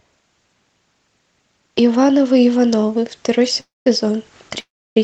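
At 3.60 to 3.87 s and again at 4.60 to 4.97 s the speech stalls in a call audio freeze, likely from delayed packets draining the jitter buffer. A brief fading buzz then silence fills each gap. Unlike a dropout, the speech resumes exactly where it stopped, with nothing lost.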